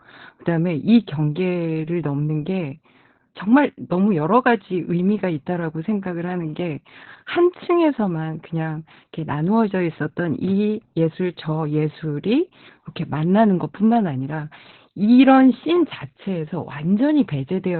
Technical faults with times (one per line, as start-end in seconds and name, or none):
0.00-17.79 Opus voice compression